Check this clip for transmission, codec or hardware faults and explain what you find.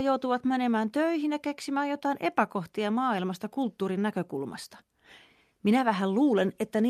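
Checking this clip turns up no faults to explain.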